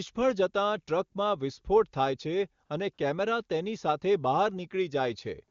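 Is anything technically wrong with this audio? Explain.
Yes. Two brief AMR comfort noise gaps occur, at 2.65 to 2.69 s and 2.93 to 2.97 s, each 40 ms long. The sender treated these moments as silence and stopped transmitting speech frames. The receiver filled them with smooth synthetic noise, which briefly replaces the real background.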